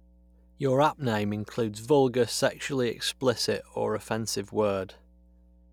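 Mains hum runs under the speech for the whole clip. It is a steady low tone at 60 Hz, sitting roughly 30 dB below the speech. The power line has leaked into the signal, through a ground loop or a nearby transformer.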